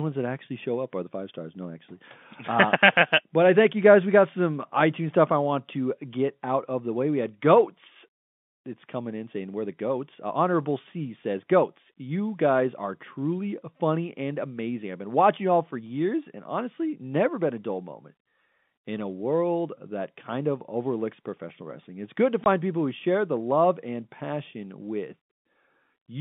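At 22.44 to 22.46 s, between "wrestling it's good to" and "people who share the", there is packet loss filled with silence. A single 20 ms gap, which fits one lost packet, opens in the speech and is filled with digital silence, with hard edges. Concealment would smear or repeat the preceding sound to cover the gap; here the hole is truly empty and framed by abrupt transitions. The narrow telephone band of the G.711 line stays unchanged on either side of it.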